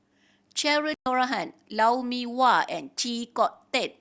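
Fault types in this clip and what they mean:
playback stall: the speech cuts to silence for 120 ms at 0.94 s, then resumes; likely the player ran short of data or its thread was blocked.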